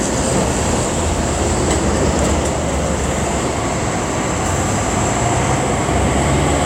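From about 0.83 s through 6.26 s there's a regular tick or pop roughly every 0.9 s, around seven of them in all, sitting on top of the sound. That steady spacing points to clock drift buffer slips: the likely cause is two devices running on separate clocks that disagree by something like 700 ppm, so the buffer between them creeps until a chunk of roughly 30 samples gets dropped or repeated, producing each click.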